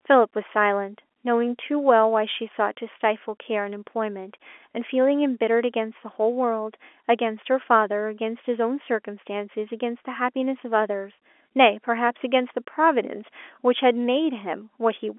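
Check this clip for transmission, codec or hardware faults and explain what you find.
Nothing stood out on listening: the speech comes through with the narrow band of an ordinary G.711 telephone line, stopping at about 3.7 kHz, and with nothing amiss in the transmission, coding or hardware.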